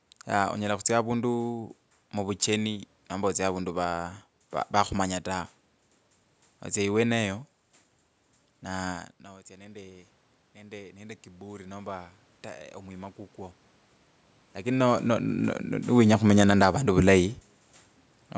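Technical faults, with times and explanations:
8.78–12.05 s, automatic gain rising: Near 9 s the talker moves back, and the level reaching the microphone drops by about 20 dB. The automatic gain control responds by raising its gain about 8 dB across three seconds. Voice and room noise swell together.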